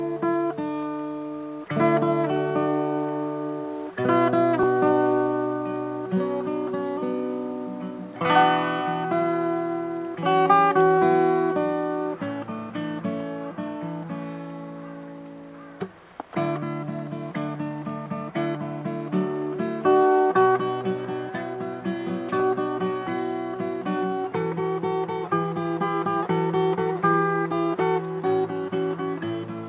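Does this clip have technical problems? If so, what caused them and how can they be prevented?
No, there are no technical problems to report here.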